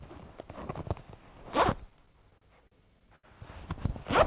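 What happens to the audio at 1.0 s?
Nothing goes wrong at 1.0 s: the sound carries on intact through that moment, with the narrowband call-path sound, nothing above 4 kHz, continuing as it does.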